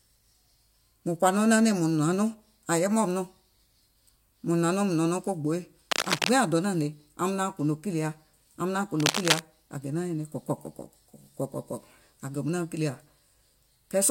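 Speech, with two short bursts of cable scratch noise. The first runs from 5.91 to 6.29 s. The second runs from 9.00 to 9.41 s. Each is a dense, uneven crackle and rustle laid over the speech, roughly as loud as the speech itself. The likely cause is a worn cable, connector or control being moved. Its contact resistance jumps about rapidly, and that adds the ragged noise.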